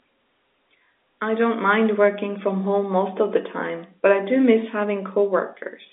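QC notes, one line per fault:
No faults heard.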